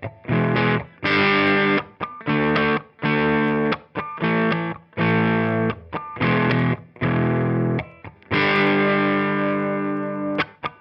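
Nothing in the audio stood out as a technical fault on listening.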